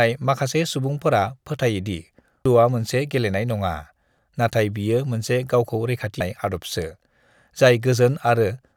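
A speech recording with two abrupt skips, at 2.46 s and 6.21 s, each jumping forward by roughly a third of a second with the audio on either side butted together and no gap of silence. The regular spacing points to audio missing between chunks, likely a recorder or processor working in blocks of about 4 s and dropping material each time it closes one block and opens the next.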